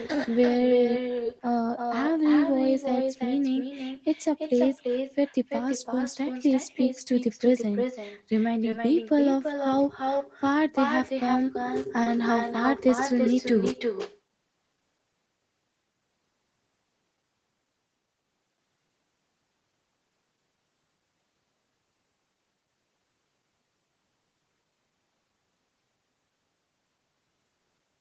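With no echo canceller at the far end, its loudspeaker feeds back into its microphone, so the speech returns after the network round trip. From start to finish, every phrase is trailed roughly a third of a second later by a thinner copy about 6 dB quieter.

Short concealed packet loss occurs four times: 1.23–1.27 s, 8.71–8.74 s, 10.18–10.22 s and 12.04–12.08 s. Each time about 20 ms of audio arrived too late, and the decoder extended the preceding sound to cover the gap. Each spot is heard as a brief smear or wobble.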